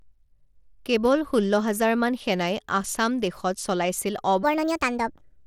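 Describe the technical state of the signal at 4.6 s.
At 4.6 s the speech sounds hurried and pitched well up, by roughly seven semitones. This is a section at the wrong speed, starting at 4.43 s, just after "সেনাই আসাম দেশত চলাইছিল", and running to the end of the clip at 5.47 s. Playback is about 1.43 times faster than the original recording, so pitch and tempo rise together rather than independently. The likely cause is an editor or player handling this stretch against the wrong clock.

Under that shift, the same moment also carries a gritty, coarse texture with thin, unsteady treble. This is Bluetooth SBC compression, and its damage is plainly audible. The codec splits the signal into a few wide sub-bands and hands out bits without a hearing model. At a modest rate, which fits roughly a 96 kbps setting, the upper bands are starved and the rest are quantised crudely, leaving grain and aliasing on the sound. 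This likely comes from a Bluetooth link somewhere in the chain.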